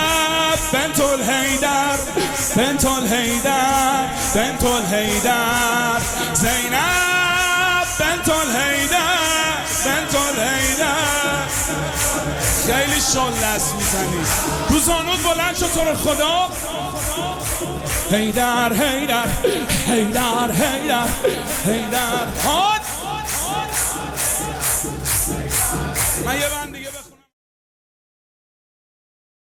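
Nothing stood out on listening, apart from a smooth fade-out from about 26 s that is complete by 27.34 s.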